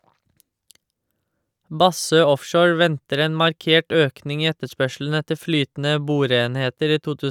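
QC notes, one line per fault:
Nothing to flag here; I listened through the whole clip and didn't hear a single problem worth logging.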